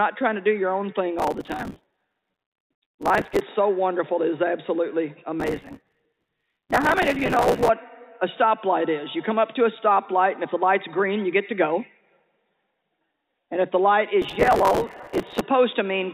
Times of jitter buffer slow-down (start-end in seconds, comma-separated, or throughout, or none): none